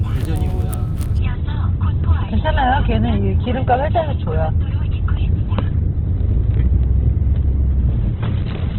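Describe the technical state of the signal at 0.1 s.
The signal at 0.1 s is intact, with no audible fault at that moment.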